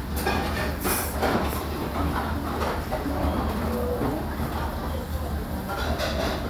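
Listening through this recording of sounds, nothing technically stood out.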